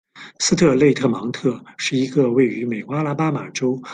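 Listening through this short speech recording, nothing stood out as a technical problem.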